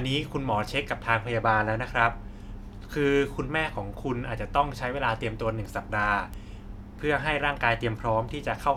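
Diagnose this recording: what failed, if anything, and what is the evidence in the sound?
A single bit error spike sits at 6.34 s. It's one sharp broadband tick unrelated to the speech. A flipped bit in storage or a digital link made a one-sample jump.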